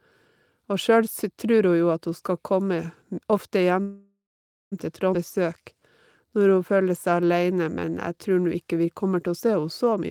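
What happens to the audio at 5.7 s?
At 5.7 s the speech is inside a jitter buffer slow-down running from 5.39 to 5.81 s: the receiver repeats single pitch periods to add 42 ms of reserve, so playback drops to 92% speed and sounds drawn out, yet pitch stays unchanged, unlike a tape-style slowdown.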